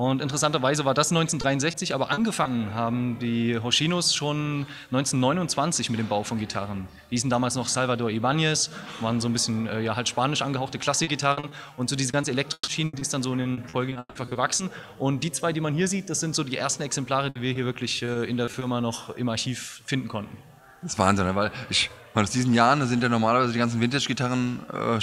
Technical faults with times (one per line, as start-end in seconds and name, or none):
1.41-2.47 repeated packet loss (robotic sound)
11.03-14.61 repeated packet loss (robotic sound)
17.29-18.63 repeated packet loss (robotic sound)